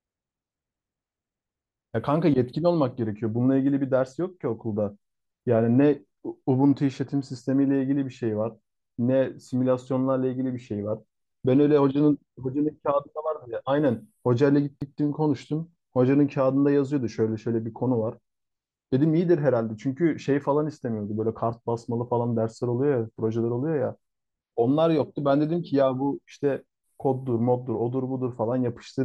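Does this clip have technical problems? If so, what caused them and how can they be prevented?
Yes. A CD skip occurs at 14.81 s: a tick and a mute of only a few milliseconds as the laser jumps to another turn of the disc's spiral, so the speech resumes from a different point. Prevent it by cleaning the disc and isolating the player from knocks.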